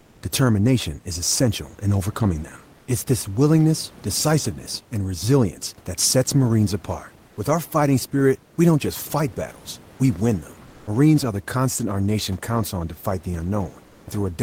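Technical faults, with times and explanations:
0.00–0.21 s, 2.77–2.87 s, 10.67–10.87 s and 13.87–14.07 s, comfort noise in place of the background: in the pauses before "determination is essential in", after "essential in overcoming them" and after "on to fight the", the textured room noise becomes smooth, steady synthetic hiss for 100 to 210 ms, likely from Opus discontinuous transmission. The level shifts by up to about 3 dB, so unlike a dropout or noise gate, the pause is filled rather than silent.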